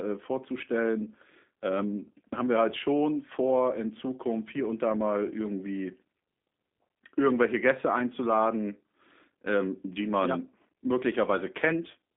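G.729 coding runs from start to finish, with plainly audible damage. The speech is rebuilt from a vocal tract filter, pitch predictor and sparse pulses, which fits an 8 kbit/s link. It sounds rough and faintly synthetic, confined to roughly 200 Hz to 3.5 kHz, with nothing above 3.6 kHz.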